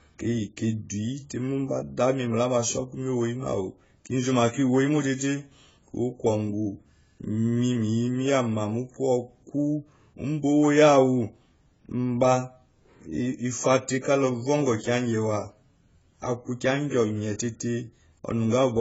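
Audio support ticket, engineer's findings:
Speech band-limited throughout, nothing above 7.6 kHz; dull, smeared, warbling sibilants and fizzy sustained vowels. Likely cause: AAC compression (AAC-LC) at a very low bitrate, damage level consistent with roughly 16 kbps. Encoder quantises 1,024-line frames against a hearing model, drops the top band, and leaves or noise-fills spectral holes. Spectrogram: hard horizontal ceiling at 7.6 kHz, patchy blocky gaps and speckled noise-fill below it, frame-rate smearing on transients.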